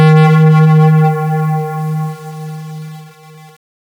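From 0 to 1.09 s the sound suffers hard clipping: driven about 18 dB beyond what the stage could pass, its peaks are sheared flat, giving a harsh fuzz on every loud moment. The waveform shows squared-off plateaus; the spectrogram shows harmonics smeared high up.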